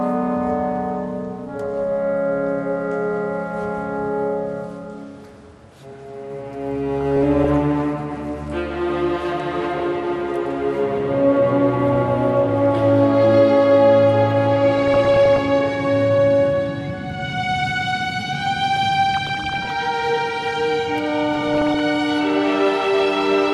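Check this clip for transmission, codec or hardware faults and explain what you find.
Two faults are audible: a dull, granular coding sound throughout, and four short bursts of burbling.

MP2 compression, throughout: the top end sounds dull and gurgly, with upper bands flickering in and out and what remains carrying a coarse, grainy edge. The likely cause is MPEG Layer II coding at a rate that fits roughly 80 kbps. At that rate there are too few bits for all 32 sub-bands, so the highest are dropped and the rest are quantised crudely.

DAB burbling, at 7.01–7.54 s, 14.78–15.39 s, 19.14–19.70 s and 21.35–21.80 s: each burst is about half a second of burbling laid over the audio. This is what weak reception does. A bit error rate of a fraction of a percent lets corrupted data past the error correction. Bad samples put short blips of noise in single sub-bands, and bad scale factors make sub-bands leap in level for up to a frame.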